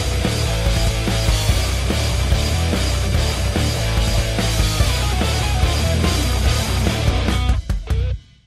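No dropouts, distortion, timing breaks or other technical faults are audible anywhere in the recording.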